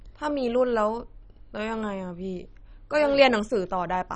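Throughout the speech there is nothing above 10.3 kHz, and the remaining bands flicker and sound coarse and gurgling. This is heavy damage, likely from MP2 compression starved of bits, which fits a rate near 32 kbps, shutting off upper sub-bands and quantising the rest crudely.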